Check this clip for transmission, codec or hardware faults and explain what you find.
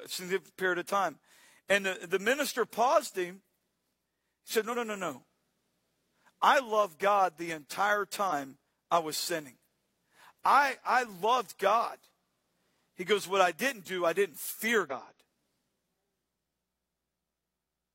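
Yep, there's damaged data in the compressed stream, four short hits: 4.69–4.75 s just before "no no", 8.27–8.33 s between "the entire" and "I was sinning", 12.12–12.16 s, and 14.86–14.92 s right after "do I didn't fear". Each time the decoder chokes on corrupt frames and loses sync, so you get a brief glitch of about 40–60 ms.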